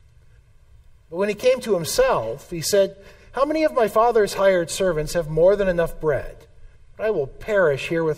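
No technical faults can be heard anywhere in the audio, and the signal holds steady from its first moment to its last.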